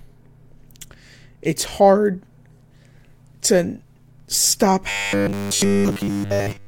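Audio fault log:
4.90–6.67 s, robotic sound from repeated short buffers: right after "to stop" the speech collapses into a rigid, metallic buzz at 100 Hz that only loosely tracks the words. This is likely a starved audio stream, with the player repeating a 10 ms slice over and over instead of playing new audio for essentially the whole stretch. A spectrogram shows evenly spaced harmonics locked to 100 Hz, and the waveform shows an identical short cycle repeating.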